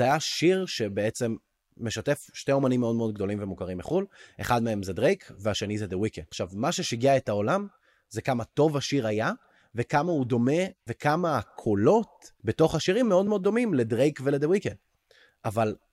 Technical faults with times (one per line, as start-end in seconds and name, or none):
none